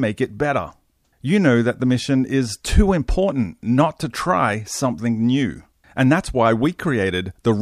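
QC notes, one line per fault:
No faults found in this speech clip; no dropouts, clicks, distortion, level jumps or timing breaks were heard.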